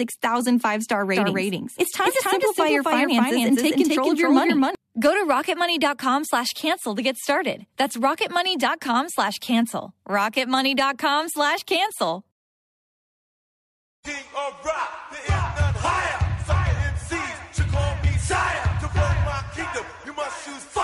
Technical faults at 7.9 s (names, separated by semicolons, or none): overlap between stream segments